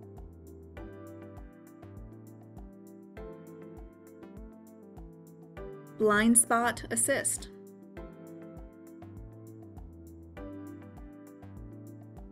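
No technical faults are audible.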